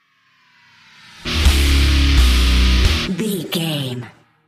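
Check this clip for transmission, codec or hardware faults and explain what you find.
There is one fault, a drift correction step from 3.26 to 4.17 s. Playback speeds up by 5.38% and pitch rises 90.7 cents, nearly a semitone, then snaps back. This is likely clock-matching software jumping its rate to rebalance a buffer. On a spectrogram, all harmonics shift upward together for that stretch. The waveform looks time-compressed.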